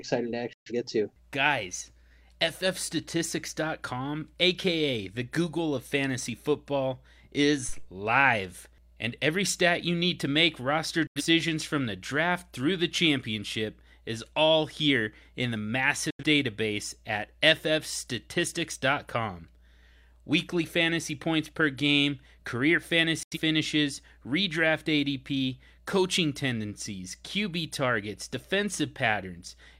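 At 0.53 s the speech drops out for about 0.18 s, a digital broadcast dropout. The receiver stopped getting valid frames and muted, fading out over about 3 ms. The 128 ms of lost audio fits three missing frames. The same dropout recurs three times. At 11.07 s it falls after "need to make roster" and resumes at "from the draft through". At 16.10 s it follows "all here in the", and at 23.23 s it follows "points per game career". Each of these later holes loses 85 ms, consistent with two frames, and the missing audio is gone.

At 7.69 s a phantom power thump sounds as a short, deep low-frequency bump that dies away over about 52 ms. A supply was switched on a live input, and that voltage step passed through the coupling capacitors as a single transient lasting roughly a quarter of a second.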